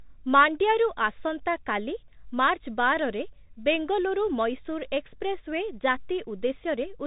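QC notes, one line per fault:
throughout: Bluetooth CVSD headset codec. The link carried the audio as one up-or-down bit per sample with an adapting step, consistent with CVSD at 64 kbps. Nothing above 3.8 kHz survives, s sounds turn scratchy, and a granular hiss sits beneath the speech.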